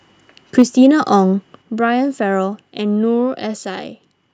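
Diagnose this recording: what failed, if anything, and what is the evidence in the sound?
Microphone overload at the converter stage runs from 0.58 to 0.86 s, where the loudest syllables take on a harsh, crackling edge. On a waveform the peaks are flat-topped, with a few percent of samples flattened off, consistent with the signal being driven about 3 dB past the ceiling. A spectrogram shows broadband vertical smearing over the harmonics at those moments. The likely cause is input gain set too high, so peaks exceed what the converter can represent and get sliced off.

Microphone volume stepped down, a call-processing fault, shows up twice. At 0.62 s, inside the distorted stretch, the level drops by about 2 dB, and at 1.62 s it falls again by about 5 dB. Each time the sound and the background noise drop together, abruptly rather than with a fade. On a waveform the envelope steps down to a new, lower plateau, and on a spectrogram the whole band, including the noise floor, darkens at once. 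This is likely the call software's gain control reacting to the clipping by lowering the device's input volume in discrete steps.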